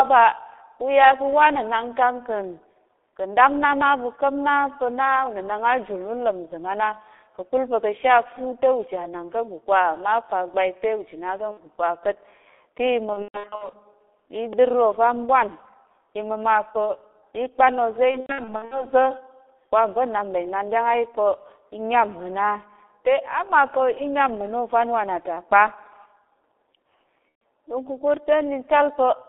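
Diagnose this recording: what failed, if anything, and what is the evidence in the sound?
Codec stage: G.723.1 coding throughout. The audio is confined to about 300 Hz to 3.6 kHz and sounds muffled and hoarse, with smeared consonants. The coarse, slowly updated vocal model produces heavy artefacts, which fits the 6.3 kbit/s mode on 30 ms frames.

Network stage: VoIP packet loss concealed by the speech codec, at 11.51–11.60 s (60 ms), 11.51 being the start, then 13.13–13.82 s, 18.11–18.87 s and 27.30–27.41 s (120 ms). The middle two are scattered gaps totalling about 330 ms, the longest runs 120 ms and 90 ms. The decoder repeats its last pitch and filter, so the sound turns into a buzzy tone or coloured noise and fades, then recovers slowly.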